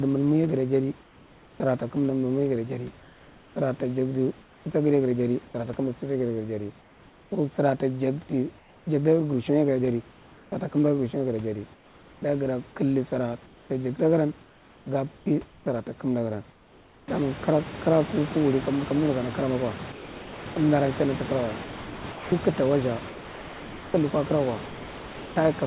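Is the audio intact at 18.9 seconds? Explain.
Yes, the audio is intact at 18.9 seconds, with no fault at that moment.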